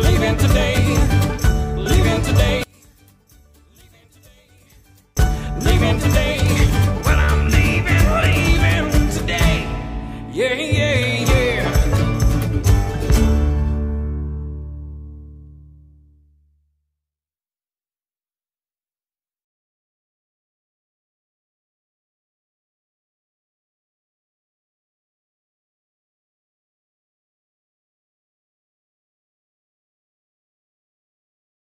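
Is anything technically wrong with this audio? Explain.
Yes. From 2.64 to 5.17 s, sound sinks about 34 dB to a faint residue, likely one channel inverted cancelling in mono; a dropout would leave silence instead.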